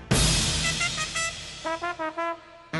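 No technical faults can be heard anywhere in the signal.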